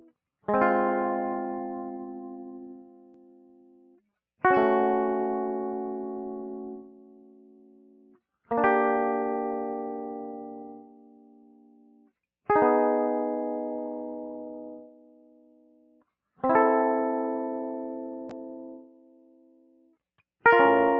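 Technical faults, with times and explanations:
Throughout: noise suppressor applied to music. A speech-oriented suppressor stays engaged on this music, treating sustained tones and ambience as noise. Gain swings by around 15 dB as it reacts, so held material pumps and thins while attacks pass largely intact, over a band that stops near 8 kHz.
2.73–4.0 s, 6.8–8.19 s, 10.77–12.1 s, 14.82–16.03 s, 18.8–19.95 s: sound cut by the noise suppressor. In each stretch the suppressor classes the steady or decaying music as noise and pulls it down by up to about 12 dB. The sustained portions sink and their tails end early, while transients survive.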